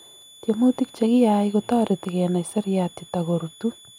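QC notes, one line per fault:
Throughout, switching supply whistle: a thin high tone wandering between 3.44 and 3.48 kHz, about 25 dB under the speech, a faint near-horizontal spectrogram line.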